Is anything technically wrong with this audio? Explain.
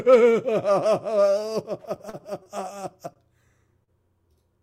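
Yes, there are three network-delivery faults.

From 1.83 to 2.49 s, repeated stalls (stutter): five jitter-buffer underruns, the longest 41 ms, are filled by extending prior sound, so the audio drags and stutters without losing content.

At 3.14 to 3.19 s, a short stall from a late packet: a 21 ms delay jump empties the buffer, and the preceding sound is held briefly with a slight buzz or dip.

At 3.84 to 3.90 s, short concealed packet loss: about 40 ms never arrived, and the concealment synthesised from the last sound leaves a brief smear or wobble.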